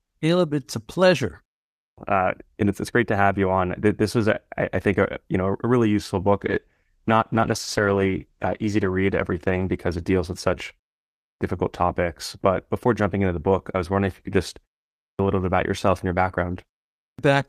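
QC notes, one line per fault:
1.75 s, 11.16 s, 14.95 s and 16.97 s: clipped start after a pause. Each time speech resumes after a short gap of about 0.36 to 0.46 s, its opening is swallowed, with 0.22 s, 0.25 s, 0.24 s and 0.22 s lost. The output device drops into a low-power state during the silence and needs time to wake and lock again. The first sounds never reach the listener, so speech starts abruptly.
6.41 to 11.01 s: call bitrate drop. The encoder rate falls from 48 kbps to 13 kbps as the call's bandwidth estimate collapses, and it sits at the lowest rate for about 2.04 s. With so few bits the Opus encoder quantises coarsely and trims the upper frequencies, so the speech turns rough, watery and muffled. Clarity returns as the bitrate climbs back toward 48 kbps.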